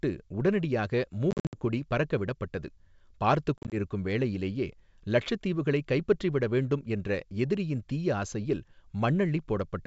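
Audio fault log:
1.31–1.58 s and 3.58–3.75 s, packet loss on an ADPCM call: hard-edged silent holes (170 ms lost over 220 ms before "பறக்க விடப்பட்டது பார்த்துக்", longest 60 ms; 90 ms over 140 ms before "வேளையிலேயே இலட்சத்தீவுகளைக் கைப்பற்றிவிட வேண்டும்", longest 40 ms). The decoder's predictor and step size lose sync, so speech resumes slightly distorted.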